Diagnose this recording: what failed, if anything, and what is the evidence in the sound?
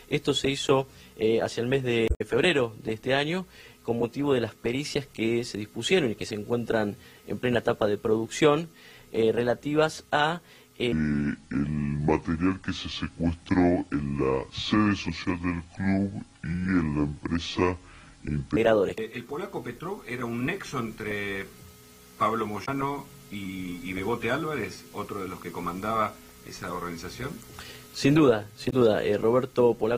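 Damaged data in a compressed stream, at the codec or storage stage, appears three times: 2.05 to 2.21 s, 22.62 to 22.69 s and 28.67 to 28.73 s. Each is a short chirp or blip where the decoder misreads corrupted frames, loses sync and hunts for the next valid header. The first adds about 24 ms to the timeline. On a spectrogram these show as brief broadband smears or vertical streaks; the waveform has an abrupt discontinuity at each edge.

A section at the wrong speed runs from 10.92 to 18.57 s, played at 0.65 times the original rate, so pitch and tempo drop together by roughly seven semitones and the sound turns deep and slow, changing abruptly at both boundaries. The likely cause is a playback or editing stage applying the wrong clock to that segment. On a spectrogram every harmonic shifts down proportionally and features stretch in time; in the waveform, periods lengthen visibly.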